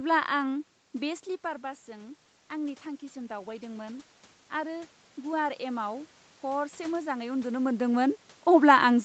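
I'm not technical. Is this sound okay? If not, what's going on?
No. From about 1.02 to 7.58 seconds, automatic gain rising sets in: after the voice drops away from the microphone around 1 second, the system slowly turns the volume up, so voice and background swell together.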